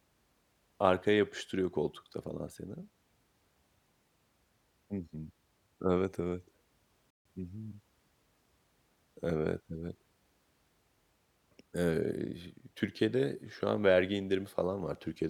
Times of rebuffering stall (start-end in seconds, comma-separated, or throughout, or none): 7.10-7.25